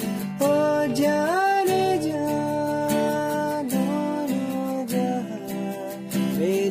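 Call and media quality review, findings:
Call and media quality review found no faults in this audio.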